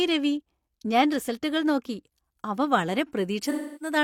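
Speech clip with AAC frame loss and concealment from 3.44 to 3.96 s, where about 0.3 s of audio was lost and the decoder patched it from the last good spectrum. It sounds smeared and phasey before decaying. On a spectrogram, frozen horizontal bands fade to near-blank, then energy returns.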